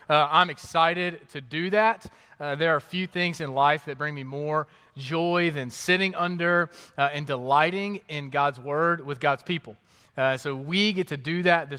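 Nothing is technically wrong with this audio.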